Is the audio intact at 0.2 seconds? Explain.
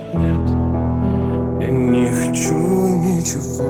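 No, channels drifting apart affects 0.2 seconds and the whole clip. The two channels run on clocks differing by around 40 ppm, so their offset creeps toward a fraction of a millisecond. Summed to mono, comb notches sweep slowly, heard as slow flanging.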